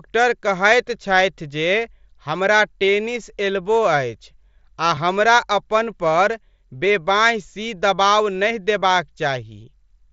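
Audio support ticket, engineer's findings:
Concealed Bluetooth headset packet loss, 4.95 s, just before "हमरा अपन पर": about 15 ms lost on the headset-to-phone link, which fits two mSBC frames. The receiver bridged the gap with the best-matching stretch of recent waveform, a short two-frame patch.

Same fault at 8.8 s, right after "सी दबाव नहि": again about 15 ms lost and filled by a repeated waveform segment. The mSBC path underneath passes speech up to 8 kHz with light grain.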